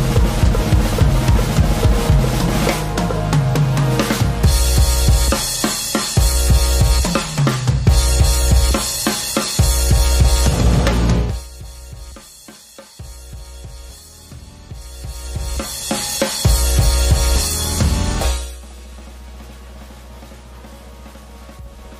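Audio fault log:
No fault to log for this clip.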